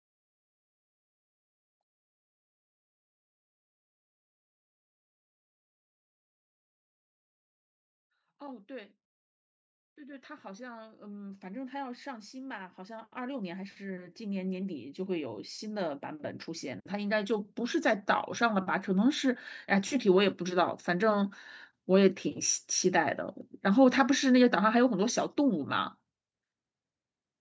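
From 9.95 s to 20.69 s, the level climbs steadily. This is automatic gain rising. The gain control judged the input too quiet and kept pushing its gain up, by about 21 dB in total. The rise is slow, spread over more than ten seconds, so there is no jump. The speech and the background noise swell together. The call microphone processing limits the band to 8 kHz, and the growing noise floor stays inside that range.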